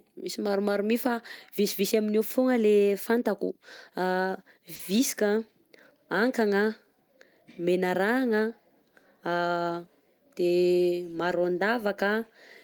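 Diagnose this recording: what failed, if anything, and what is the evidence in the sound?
The network's the culprit here: a short stall from a late packet at about 4.75 to 4.81 s. The jitter buffer ran dry, so the receiver held the last bit of speech for 40 ms, a slightly buzzy or dipped stretch, then carried on with nothing lost, just 40 ms later.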